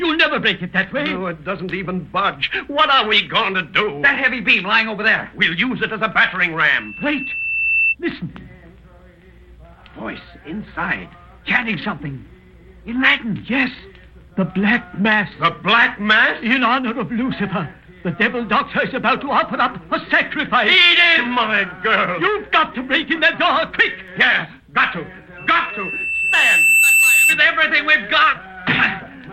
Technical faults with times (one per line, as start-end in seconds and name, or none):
6.69-7.95 loudspeaker feedback squeal
25.37-27.46 loudspeaker feedback squeal